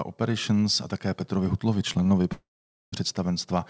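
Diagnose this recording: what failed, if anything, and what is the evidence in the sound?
Network and jitter buffer stage: there's a short stall from a late packet at 2.03 to 2.07 s. The sound just before gets held for about 22 ms while the buffer sits empty, then picks up right where it left off, so nothing's actually lost.

Bigger one: a call audio freeze from 2.32 to 2.94 s. The last bit of speech trails off into a fading buzz or hiss, then about 490 ms of silence, adding roughly 600 ms of delay. The likely cause is packets stuck in transit draining the jitter buffer. Nothing's missing afterwards, and the G.722 path's band-limit with nothing above 8 kHz is present throughout.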